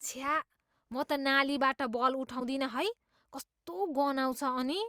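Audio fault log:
0.00–0.99 s, filter restarted on every block: During the opening second of speech, a filter in the processing chain discards its internal state at each block boundary and starts again from zero. Each fresh start leaves a small transient, and these repeat at 25 Hz, which fits blocks of about 40 ms. The result is a low, regular buzz riding under the speech, louder where the speech is louder, until it stops near 0.99 s.
2.39–2.42 s, broken MP3 bit reservoir: For about 28 ms the speech jumps ahead, roughly the length of one 24 ms MP3 frame. The likely cause is missing frames in the MP3 stream. The frame that followed the gap reached back into the bit reservoir for data it had borrowed from earlier frames and found bytes belonging to another frame.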